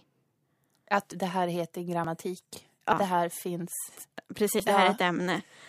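At 2.04 s, just after "det här heter", a jump marks a dropped buffer (overrun), likely losing about 50 ms; waveforms show an abrupt splice, spectrograms a thin vertical broadband line.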